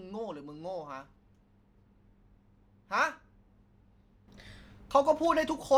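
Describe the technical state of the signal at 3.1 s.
At 3.1 s the signal is intact, with no audible dropout, distortion or other technical fault at that moment.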